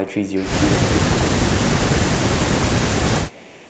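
Speech suppressed in double talk runs from 0.91 to 3.61 s: the speech dips repeatedly, at worst by about 20 dB, for around two seconds in total. The likely cause is an echo canceller that couldn't tell near-end speech from loudspeaker echo while both sides talked, so it attenuated everything.

Echo leak appears at 3.30 to 3.34 s and again at 3.52 to 3.67 s as faint scraps of speech delayed by 260 ms, about 30 and 35 dB below the main speech. This is likely a far-end loudspeaker echo that its canceller failed to fully remove before sending it back.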